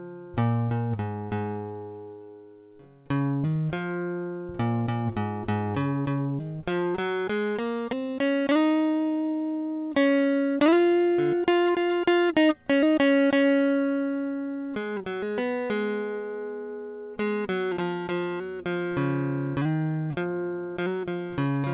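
Nothing goes wrong anywhere in this music, which simply comes through the call's G.711 mu-law path at 64 kbps with everything sitting below 4 kHz, just as that path is meant to work.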